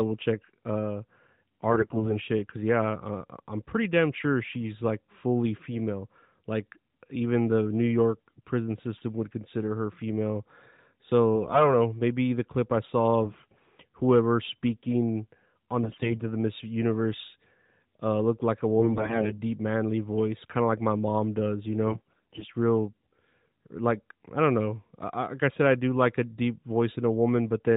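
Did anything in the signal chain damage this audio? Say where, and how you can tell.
Yes. AMR bit errors on the network link hit the speech at 1.70–2.18 s, 11.35–11.75 s, 13.24–13.66 s (between "the clip I saw" and "whoever speaking on"), 15.84–16.24 s, 18.80–19.42 s (after "uh looked like a") and 21.88–22.45 s (after "my mom does you"). In each, pitch and loudness hold but the sound turns hoarse and gargly. Weakly protected bits arrived corrupted, roughly 5 to 15 percent of them depending on the burst, so the decoder misplaced excitation pulses and mis-set fine gain and spectral values. The narrowband codec itself adds only light damage, consistent with its 12.2 kbps mode, though nothing above 4 kHz passes.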